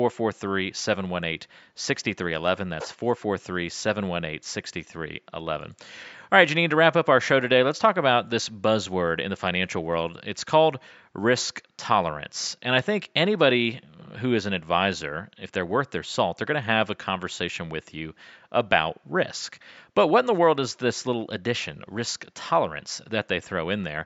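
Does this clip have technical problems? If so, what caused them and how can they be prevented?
No, the speech signal shows no technical problems; the only background is faint room noise sitting about 51 dB below the speech, which belongs to the recording space rather than the system.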